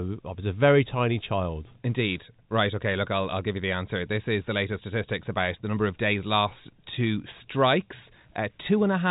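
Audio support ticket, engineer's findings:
No faults found; telephone-band speech, nothing above 3.8 kHz.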